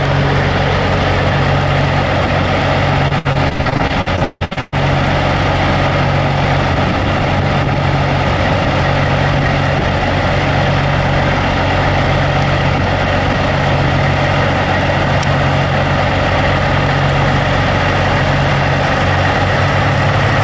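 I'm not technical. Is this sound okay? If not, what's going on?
No. From 3.08 to 4.74 s there is repeated packet loss, giving a robotic sound: pieces of the audio kept arriving late or not at all. The call software patched each hole by stretching the last bit of sound, so nearly half of that stretch is filler. The longest gap is 0.16 s. Throughout, the call connection also has its usual muffling above 8 kHz.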